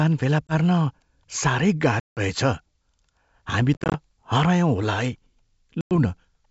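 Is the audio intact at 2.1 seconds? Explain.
No. Packet loss on an ADPCM call cuts a hard-edged silent gap from 2.00 to 2.20 s, about 170 ms or roughly fifteen packets. The decoder's predictor and step size lose sync, so speech resumes slightly distorted before settling.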